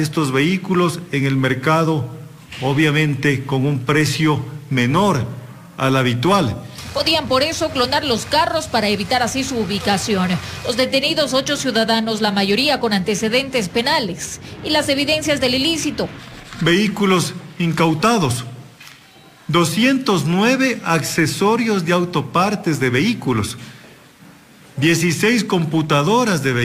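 Crude rate conversion runs through the whole clip: a gritty, inharmonic fizz rides on the louder and brighter parts of the sound, roughly 25 dB down. It fits a 48 kHz to 44.1 kHz change done by just grabbing the nearest sample, with no filtering at all.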